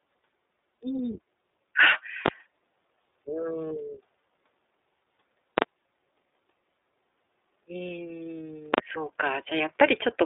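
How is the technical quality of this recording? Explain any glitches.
The recording is heavily compromised: it is coded with a narrowband voice codec throughout, has one brief dropout, and has three loud digital bangs.

Throughout, the speech has the sound of the iLBC codec. Everything is confined to roughly 300 Hz to 3.7 kHz, so sibilants are dull and the low end is thin. The slightly rough, synthetic texture points to iLBC's 30 ms frame mode at around 13.33 kbps. Each frame's excitation is coded on its own rather than predicted from the previous one. That gives this grainy character rather than the smeared, watery swirl of transform codecs such as MP3.

From 0.74 to 0.77 s, one iLBC frame is lost. For about 30 ms the decoder fills the gap by repeating the last pitch cycle blended with noise. The result is a short, held, faintly buzzy vowel instead of silence. Because the next frame decodes independently, the voice snaps back immediately. 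A plain dropout would leave a hard gap, and predictive codecs take longer to recover after a loss.

At 2.26 to 2.28 s, 5.58 to 5.62 s and 8.74 to 8.78 s, invalid numbers at full scale occur. A calculation produced infinite or undefined values, and these were forced to maximum amplitude for 20 or 40 ms blocks. Blocks this short are heard as single violent bangs, far louder than the speech. Ordinary clipping only flattens existing peaks and follows the signal. These blocks ignore the audio entirely and jump to one extreme value, far beyond the speech's peaks.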